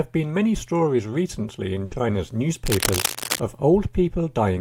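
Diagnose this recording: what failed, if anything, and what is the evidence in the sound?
At the network stage there's a burst of packet loss from about 1.85 to 2.03 s. Once the packets stop arriving, the receiver keeps the last bit of sound going for roughly 60 ms and fades it down, so you get a brief held, decaying tail instead of fresh audio. When playback picks up again, about 60 ms of the original is simply gone, so the sound jumps ahead.

Then from about 2.66 to 3.40 s there's cable scratch noise: dense, irregular scratchy rustling laid right over the sound, only a little quieter than the signal itself. That ragged, crackly texture is what you get when contact resistance flickers rapidly, so the likely cause is in the analogue wiring, with a worn cable, connector or control being moved during those three-quarters of a second.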